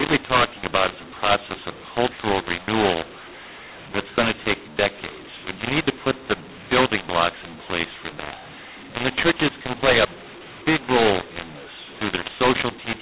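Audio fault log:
throughout: mu-law and A-law mixed up. A-law telephone samples decoded as mu-law scramble levels, making speech harsh and distorted and filling pauses with noise.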